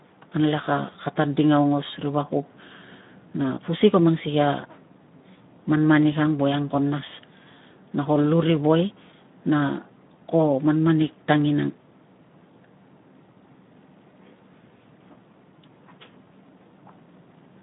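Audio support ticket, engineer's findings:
Speex codec, throughout: speech hoarse and noisy, band limited to 150 Hz–3.7 kHz; CELP excitation starved of bits, damage consistent with roughly 11 kbps narrowband mode.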